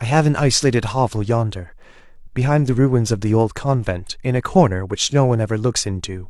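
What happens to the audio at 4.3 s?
Nothing goes wrong at 4.3 s; the speech carries on intact through that moment with no dropout, click, distortion or other fault.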